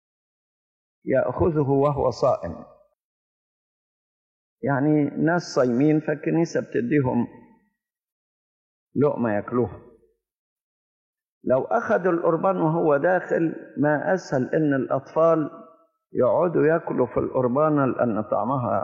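At 8.13 s the audio drops abruptly into silence and stays there until 8.86 s, then picks up again at exactly the point where it broke off, with nothing skipped or repeated. That is a rebuffering stall: playback drained its store of downloaded audio and had to halt until more data arrived. No material is lost, but the gap inserts about 0.73 s of dead air, stretching the clip's timeline by that amount.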